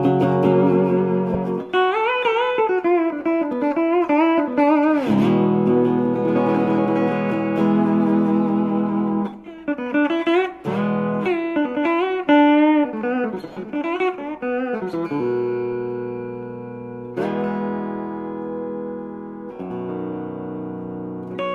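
The audio has two short gaps from lost LE Audio frames, at 1.33 to 1.35 s and at 13.53 to 13.57 s, covering about 15 ms and 37.5 ms, which fits two and then five missing frames. The LC3 decoder fills each gap by replaying the last spectrum with randomised signs, so tonal content turns into a brief noisy smear rather than dropping to silence or repeating as a clean stutter.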